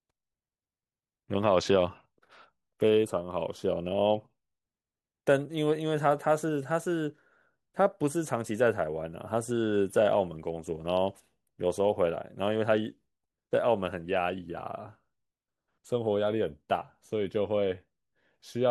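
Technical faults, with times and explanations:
Nothing stood out on listening to this speech recording.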